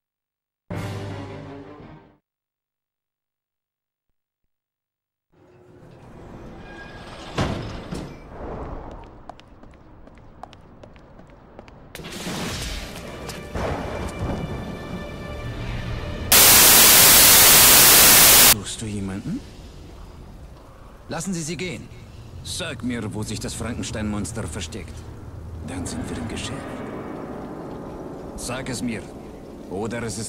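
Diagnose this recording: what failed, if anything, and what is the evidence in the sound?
The failure sits in sample-format conversion. From 16.32 to 18.53 s the sound turns into loud, harsh broadband noise. This is samples built from the wrong bytes. Each value is assembled misaligned or byte-swapped, so the rapidly changing low bits dominate the output.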